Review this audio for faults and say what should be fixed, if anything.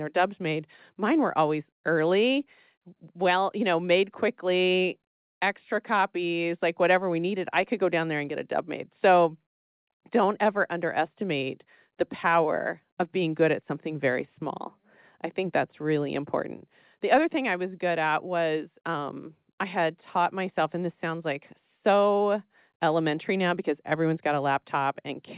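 No faults; nothing needs fixing.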